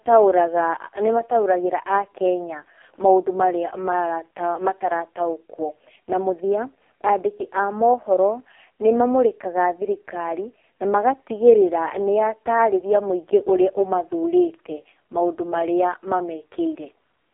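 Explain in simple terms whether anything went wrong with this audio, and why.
Something did go wrong, and it runs the whole way through: the speech went through the AMR narrowband mobile codec, the old phone-call format. Nothing above 3.4 kHz survives, so it sounds thin and boxy, and heavy squeezing leaves the voice buzzy and synthetic.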